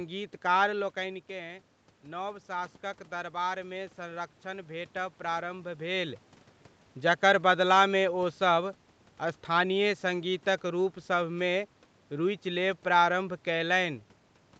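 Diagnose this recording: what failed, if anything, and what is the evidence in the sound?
The automatic gain rising happens in the call processing. Around 0.5 s the talker moves back and the level drops by about 10 dB. From 1.0 to 5.89 s the AGC slowly adds about 6 dB, so the voice and room noise swell up together.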